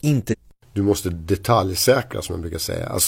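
At 0.28 s the speech breaks into a short glitch lasting until about 0.35 s. This is damaged data in a compressed stream. A stretch of the encoded bytes is corrupt, so the decoder misreads those frames. It loses its place and hunts for the next valid frame header. The result is a disturbance of roughly 66 ms.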